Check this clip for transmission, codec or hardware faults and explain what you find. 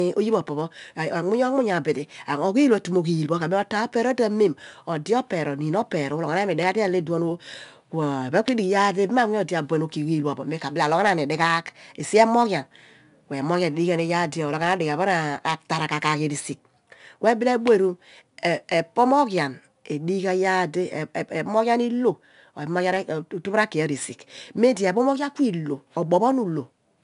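The clip carries a codec fault from start to finish: 4-bit ADPCM compression. Each sample is coded as a coarse 4-bit step away from a predicted value, with a step size that adapts as it goes. The resulting error is noise that follows the speech level, heard as a gritty hiss on every loud syllable and roughened consonant onsets where the step cannot grow fast enough. On a spectrogram that noise shows as a grainy broadband haze riding under each louder passage. Nothing appears above 10.6 kHz, which points to a sample rate near 22 kHz and about 90 kbps.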